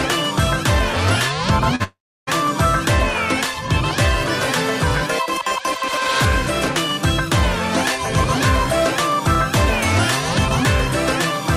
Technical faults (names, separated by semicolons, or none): short concealed packet loss; long network dropout